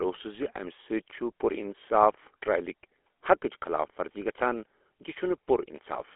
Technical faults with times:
0.00-6.16 GSM full-rate codec

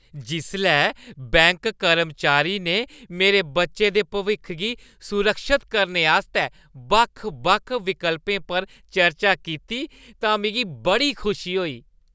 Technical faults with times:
none

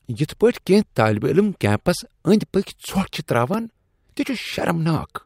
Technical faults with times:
3.54 block of digital silence

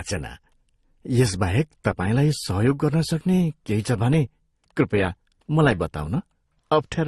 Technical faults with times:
0.00-7.08 transcoding between lossy codecs

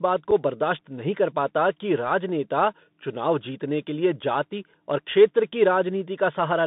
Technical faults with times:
0.00-6.67 Bluetooth CVSD headset codec
0.31 unconcealed Bluetooth headset packet loss

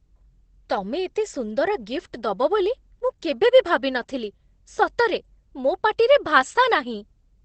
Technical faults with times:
0.00-7.45 Opus voice compression

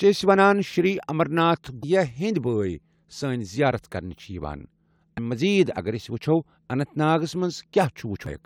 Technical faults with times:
1.82 damaged data in a compressed stream
5.17 damaged data in a compressed stream
8.26 damaged data in a compressed stream

